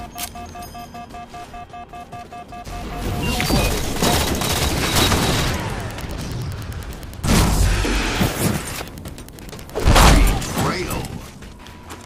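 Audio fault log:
3.34–9.89 s Wi-Fi interference: steady faint ticking about ten times a second, well beneath the sound, as the audio circuit rectifies a nearby radio's 102.4 ms beacon.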